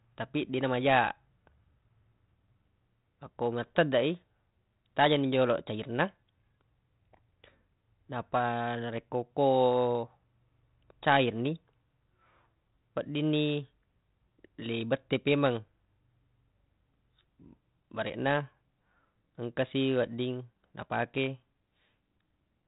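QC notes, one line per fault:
Nothing stood out on listening to this speech recording.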